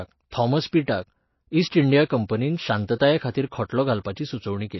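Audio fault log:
throughout, MP3 compression: The speech sounds watery and swirly, with smeared consonants and nothing above about 5.8 kHz. This is likely a starved MP3 encode, which fits a low bitrate around 24 kbps: treble is cut off and weak frequency lines flicker between frames.
2.05–2.10 s, 2.28 s, 2.96–3.00 s and 3.31–3.35 s, pre-echo: A brief hiss precedes each sharp onset, lasting 17 to 51 ms, and the attack sounds blurred. The codec spreads noise sized for the loud attack across its whole block, filling the quiet moment just before.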